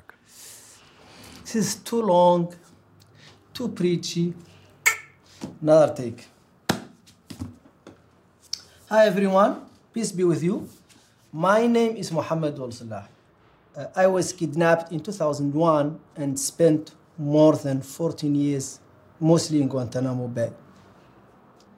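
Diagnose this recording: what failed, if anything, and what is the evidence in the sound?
Nothing failed in this recording, and the sound gives no evidence of a fault at any stage.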